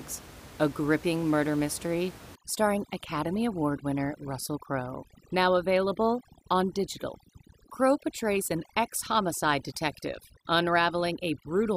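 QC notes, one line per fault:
2.35 s to the end, overdone noise removal: right after "a gripping murder mystery" the noise reducer clamps down hard, so the room noise, about 19 dB under the speech, drops and breaks up into twinkly specks, and the speech's quieter bands get switched off too.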